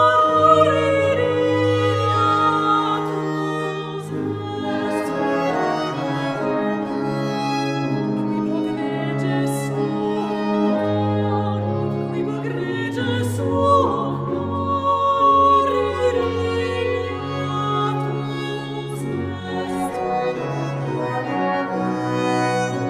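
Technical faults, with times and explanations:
No technical faults detected.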